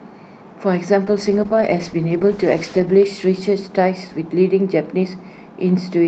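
From about 1.04 s the speech hits a call bitrate drop that lasts until around 5.99 s. The link's bandwidth estimate fell and the encoder was pushed to spend far fewer bits, so it codes much more coarsely. The drop sounds like a fall from roughly 64 kbps to about 11 kbps, bottoming out for around 1.9 s. Over that stretch the voice turns rough and watery, and the top end gets shaved off, leaving it noticeably muffled.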